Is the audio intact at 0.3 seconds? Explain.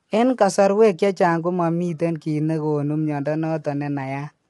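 No. The speech at 0.3 s sounds rough and grainy throughout the clip, with nothing above 11.6 kHz. This is likely low-delay AAC compression at roughly 32 kbps.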